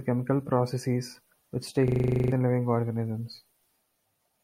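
A speech recording that, between 1.88 and 2.32 s, just after "chemical processes which", collapses into one short piece looping rapidly until "living organisms". It is a system hang loop: the system froze while the hardware replayed one 40 ms buffer eleven times at 25 Hz, losing about 0.4 s of audio.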